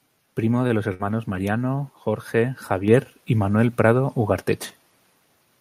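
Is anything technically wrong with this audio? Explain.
Yes, there are three separate faults in this speech clip, all in the receive and capture chain.

Between 0.67 and 0.73 s there is a short stall from a late packet. A packet missed its playout time and the jitter buffer emptied, so the receiver extended the last bit of speech for about 24 ms until the data arrived. Playback then resumed exactly where it left off, so no speech is lost, but the sound holds briefly with a faint buzzy or dipped texture. From that point on, playback runs 24 ms later than before.

From 0.94 to 1.02 s there is a burst of packet loss. Several consecutive packets were lost or arrived too late to be played. The receiver filled about 56 ms by continuing the preceding sound and fading it down, which produces a short held buzz or a decaying hiss. When real audio returns, roughly 60 ms of the original speech has been skipped, so the speech jumps forward.

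At 2.88 s there is a stepped microphone volume increase. The call software judged the input too quiet and raised the device's capture gain in a single step of about 5 dB. Because the change happens before any processing, the speech and the background noise jump up together, abruptly and mid-stream, rather than ramping smoothly the way a gradual gain control would.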